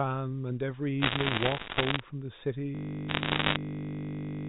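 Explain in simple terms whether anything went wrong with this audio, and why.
Two things went wrong. From 1.02 to 2.0 s, and again from 3.09 to 3.56 s, there are bit errors on a digital phone line: a small share of the stored digits got flipped, so single sample values jump and you hear scattered sharp ticks and crackle over whatever is playing underneath, which they otherwise leave unchanged.

From 2.75 s to the very end, a system hang loop takes over: the computer froze while the sound hardware kept replaying the same 20 ms scrap, 87 times over. Because the scrap is so short, it becomes a steady buzz at 50 per second, not a stuttering repeat, and the speech stops moving forward.

The difference is easy to hear. Bit errors are random clicks laid over speech that continues normally. The hang loop is one tiny piece repeated with perfect regularity, so the sound is frozen in place.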